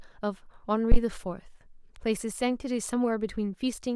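At 0.92 to 0.98 s, a phantom power thump. A supply step on the live input passed through coupling capacitors, giving a deep thump peaking at about -9 dBFS, decaying within 14 ms.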